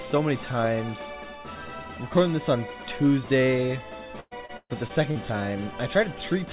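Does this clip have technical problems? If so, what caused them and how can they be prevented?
Yes. From 4.2 to 5.17 s there is repeated packet loss, heard as robotic, choppy sound. Five holes open in quick succession, the longest about 130 ms, and the receiver fills each by stretching the last stretch of audio, so roughly a third of that span is synthetic. On a spectrogram, already empty above 4 kHz as expected from a G.711 mu-law call path, smeared, repeated bands appear; the waveform shows periodic copies and dips. Stronger jitter buffering, forward error correction and a more stable network connection would prevent it.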